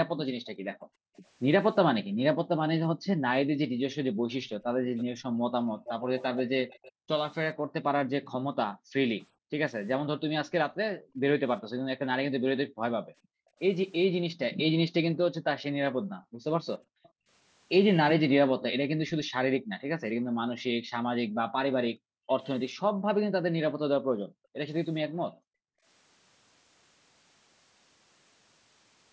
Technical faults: background gated by the echo canceller; echo leak

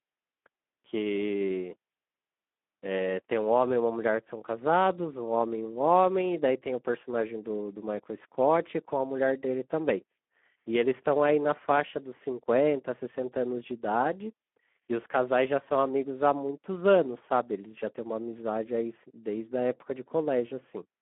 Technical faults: Speex codec

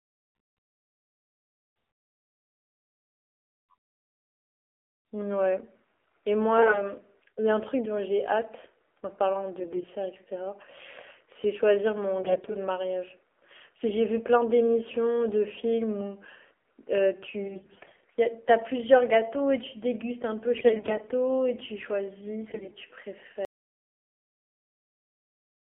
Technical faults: AMR narrowband mobile codec; AMR bit errors; audio dropout to silence

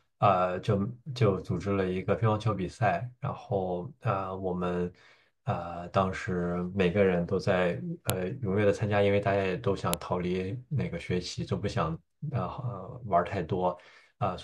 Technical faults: file header played as audio

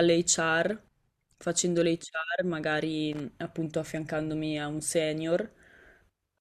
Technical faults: loose connector crackle

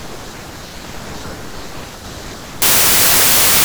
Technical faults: wrong sample width

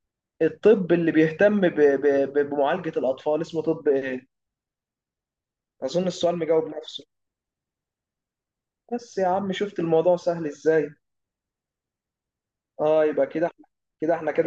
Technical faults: none

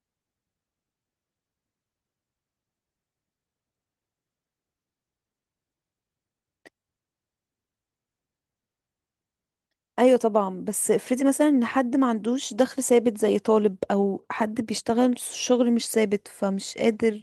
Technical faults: none

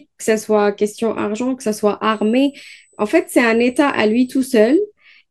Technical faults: USB whine

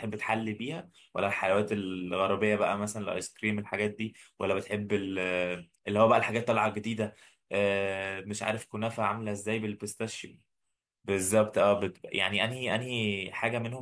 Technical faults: none

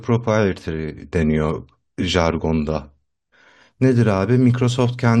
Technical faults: adaptive stream starting at a low bitrate

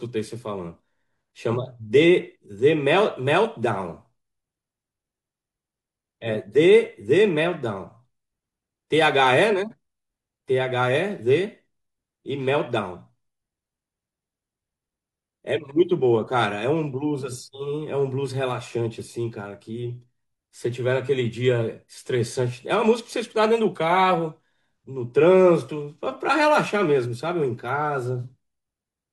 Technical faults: none

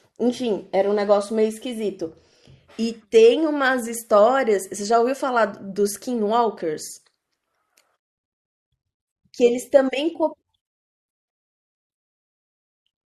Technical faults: none

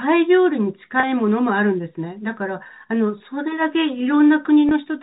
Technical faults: packet loss with pitch repetition

